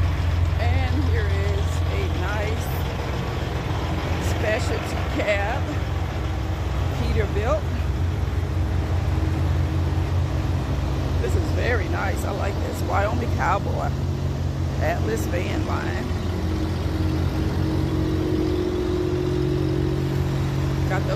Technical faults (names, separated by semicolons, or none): none